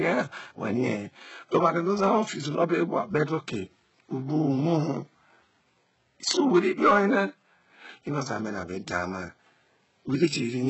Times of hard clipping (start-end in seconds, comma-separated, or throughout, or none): 0.07-0.11, 1.55-2.19, 6.29-7.18, 10.23